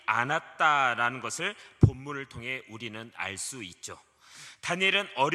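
No technical fault can be heard anywhere in this clip. Nothing breaks into the sound at any point along its run.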